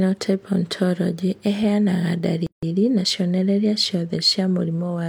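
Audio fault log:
2.47–2.63 s, gap at a join of encoded pieces: the speech drops out for about 161 ms with smeared edges, then resumes where it stopped. Two separately encoded pieces were joined untrimmed, leaving the encoder's end padding and start delay as silence.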